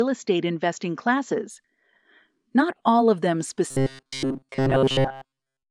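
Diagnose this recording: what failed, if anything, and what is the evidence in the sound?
From 0.0 to 1.5 s the sound is band-limited, then opens up with no gap and little level change. That's likely an input switched to a poorer device at the driver stage, whose faint extra noise sits well below the signal.

From 3.71 s to 5.7 s it turns into a rigid metallic buzz at 134 Hz, with essentially all of that stretch repeated. That's robotic sound from repeated short buffers: the driver or buffer layer is likely looping roughly 7.5 ms chunks while real audio goes missing.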